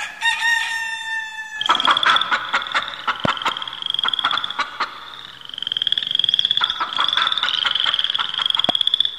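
Two loud pops break into the audio, standing roughly 20 dB above the surrounding sound. The first, between 3.25 and 3.51 s, is a double, two sharp hits in quick succession. The second is a single crack at 8.69 to 8.71 s. Each time the sound carries straight on underneath. These are most likely voltage spikes from a plug, a switch, static or a driver glitch, shaped into brief thumps by the circuitry after them.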